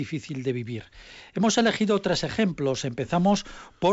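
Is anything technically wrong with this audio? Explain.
No, nothing technically wrong here.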